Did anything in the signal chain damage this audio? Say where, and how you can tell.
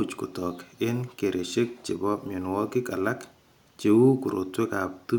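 No, no signal-chain damage audible.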